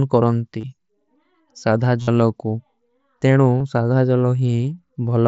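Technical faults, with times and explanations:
0.60–0.64 s, concealed Bluetooth headset packet loss: about 30 ms of headset audio goes missing, and the phone fills it by repeating the closest-matching recent stretch of waveform, so a short buzzy tone replaces the real sound.
2.02–2.08 s, concealed Bluetooth headset packet loss: the longest gap, about 52 ms, so the looped fill holds at full level long enough to hear a steady buzz, then a slight warble as real audio resumes.
3.59 s, concealed Bluetooth headset packet loss: about 15 ms patched over with repeated waveform.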